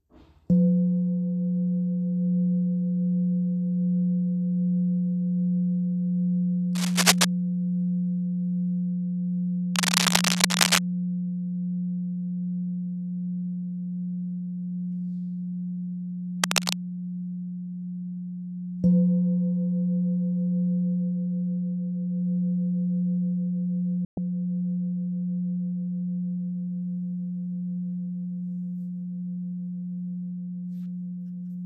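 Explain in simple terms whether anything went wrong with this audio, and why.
Two separate problems can be heard.

The first is cable scratch noise, at 6.73 to 7.26 s, 9.75 to 10.79 s and 16.44 to 16.74 s. Each time, a rough, crackly scratching sits on top of the sound, as loud as or louder than the sound itself. The likely cause is a worn cable, plug or control being moved, so its electrical contact flickers rapidly and adds bursts of noise.

The second is a digital broadcast dropout at 24.05 s. The sound fades out almost instantly and is silent for about 0.12 s before it returns. That gap fits a handful of broadcast frames that the receiver either never got or could not read, so it muted until good data arrived. Whatever was sent during that moment is gone and cannot be recovered from this recording.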